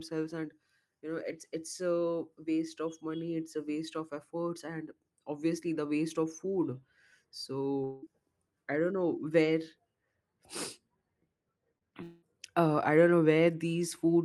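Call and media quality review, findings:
Long network dropout, 7.84–8.04 s. Speech stops arriving for about 0.2 s; roughly 0.18 s is bridged by a decaying synthetic continuation rather than silence, then audio resumes with that stretch gone. Likely cause: burst of lost or late packets on the network leg, jitter buffer running dry.

Long network dropout, 12.03–12.24 s. Same signature: about 0.2 s of real speech missing, the gap filled by a fading buzz/hiss extension of the last sound, no hard silence, audio returns later. Likely cause: a second network loss burst.

Short concealed packet loss, 11.78–11.83 s. A brief smear about 20 ms long where that stretch of audio is missing. The decoder extrapolates the preceding sound and cross-fades back into real audio. Probable component: Opus packet loss concealment covering late or dropped audio.

Audio band tops out near 12 kHz, with coding noise that fits an Opus stream around 32 kbps.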